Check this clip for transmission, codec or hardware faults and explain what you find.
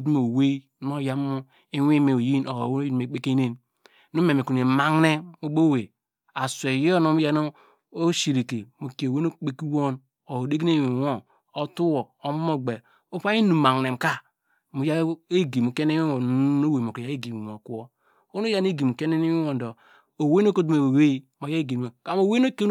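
No transmission, codec or hardware faults turned up in this clip.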